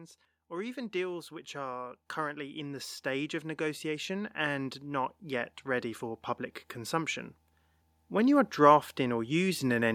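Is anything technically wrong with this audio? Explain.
Yes. Automatic gain rising from 0.48 to 7.29 s, and again from 8.09 to 9.9 s. The automatic gain control judged the incoming level too low and pushed its gain up gradually rather than in a step, adding about 14 dB across the first stretch and about 4 dB across the second. Because the whole signal is amplified, the speech and the background noise swell together, so the room tone climbs in step with the voice.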